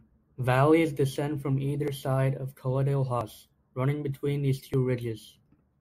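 Speech clip with a likely dropped buffer (overrun) at 1.88, 3.21 and 4.74 s: roughly 10, 30 and 10 ms vanish, each gap spliced shut, so the sound jumps ahead.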